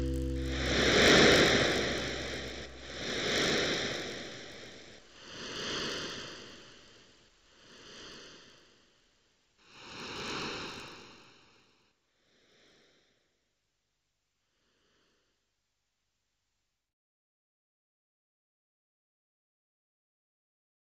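Throughout, a resampler restarted on every block: each 20 ms block was converted without its neighbours, so every edge carries a small error. The result is a 50 Hz buzz present only with signal. Spectrograms show faint vertical lines every 20 ms; waveforms show tiny steps.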